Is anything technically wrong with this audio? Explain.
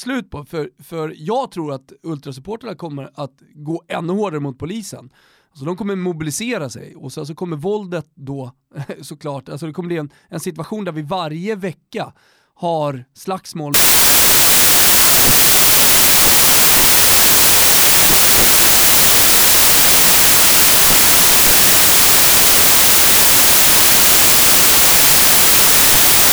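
Yes. From 13.74 s, right after "varje vecka har slagsmål", through to the end, the samples are built from the wrong bytes. The reader misassembles each sample, so the jittery low bits become the big part of every value. It turns into loud, harsh noise, close to white on the louder passages.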